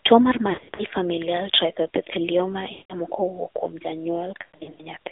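A speech recording carried over a mobile link, with the AMR narrowband mobile codec audible throughout. The band is confined to roughly 300 Hz to 3.7 kHz, so nothing above the 4 kHz narrowband limit survives. The speech has the buzzy, synthetic quality of a low-rate vocal-tract model driven by sparse pulses, and the degree of coding damage fits the 7.4 kbps mode. On top of this are three bursts of lost AMR speech frames, where failed frames were replaced by the decoder repeating its last good pitch and spectral settings at falling gain. From 0.50 to 0.83 s about 180 ms of audio is lost across a 280 ms stretch, and the longest gap of 80 ms is heard as a smeared, decaying stretch. From 2.72 to 2.93 s about 180 ms drops out, with the concealed sound dragging and fading toward silence before the speech returns briefly weak. From 4.42 to 4.81 s about 240 ms is lost across 360 ms, with a longest run of 120 ms that is heard as a drawn-out fade.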